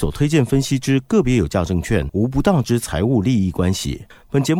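Nothing stood out as a technical fault on listening to the speech recording.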